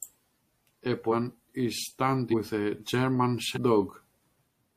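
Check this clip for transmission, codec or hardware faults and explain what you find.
The speech shows compressed frames skipped three times, at 1.11 s, 2.30 s and 3.54 s. Each time the decoder drops about ten 42.7 ms frames, so the speech leaps forward by roughly 0.4 s.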